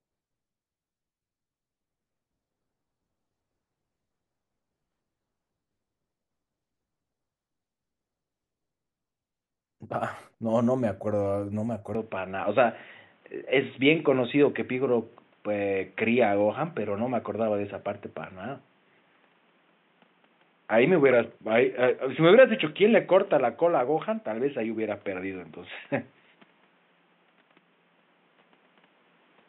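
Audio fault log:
11.95–29.48 s, input switched to a poorer device: from 11.95 s the speech abruptly turns dull and boxy, with no gap at the change and no clear level jump. Nothing remains above 3.8 kHz, which is likely a switch to a narrower-band microphone or headset profile. A spectrogram shows the upper band cut off sharply there, with a faint new noise floor roughly 40 dB below the speech.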